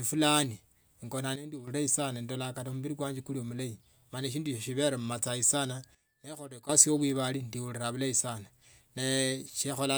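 At 1.36 s the speech and background drop together by about 9 dB, then return at 1.68 s. At 5.95 s they fall by about 12 dB until 6.69 s. Each sudden gain jump likely comes from digital gain switched without a ramp.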